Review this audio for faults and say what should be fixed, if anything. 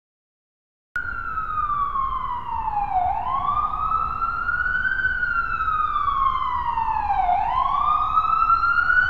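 Capture began late, so the first 0.96 s is digital silence, and the sound then jumps in mid-event at 0.96 s with no natural attack: a cut-off start. Start recording or buffering before the source begins so the opening is not truncated.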